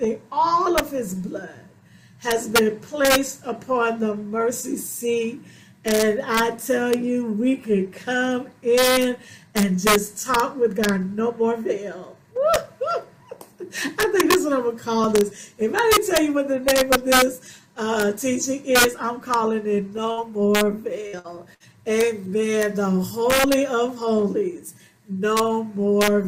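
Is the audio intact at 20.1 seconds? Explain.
No. A burst of packet loss runs from 20.11 to 20.20 s. For about 57 ms the last sound is extended and faded into a held buzz or dying hiss. Playback then resumes with roughly 60 ms of material gone.

Integer overflow is also present throughout. The signal is driven about 3 dB past the integer limit, so roughly 0.4 percent of samples wrap to the opposite sign instead of being limited, producing sharp cracks on loud moments that are harsher than ordinary clipping.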